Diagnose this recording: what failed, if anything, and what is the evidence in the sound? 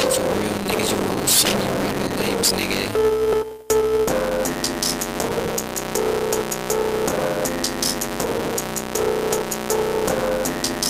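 Filter restarted on every block, throughout the clip: a processing-stage filter clears its state each block, giving a level-following 188 Hz buzz that fits 256-sample blocks.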